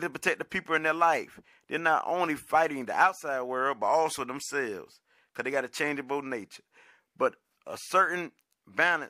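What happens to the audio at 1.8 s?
At 1.8 s the speech carries on intact, with no dropout, click, glitch or distortion at that moment.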